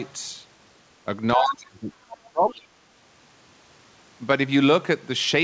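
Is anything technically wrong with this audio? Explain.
Yes. From 1.36 to 2.85 s, about a second and a half, the speech sinks by up to roughly 30 dB, thins and breaks into fragments. This is speech suppressed in double talk, likely from an echo canceller that, with both ends talking at once, could not tell this talker apart from the loudspeaker echo and turned everything down together. The sound then comes back at full level, still band-limited to nothing above 8 kHz as a wideband call codec such as G.722 would leave it.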